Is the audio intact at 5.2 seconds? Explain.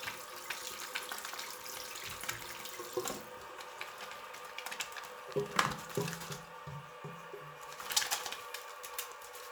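Yes, the audio is intact at 5.2 seconds, with no fault present at that moment.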